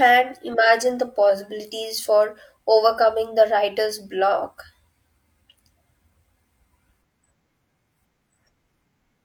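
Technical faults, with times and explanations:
No technical faults are present in this speech clip.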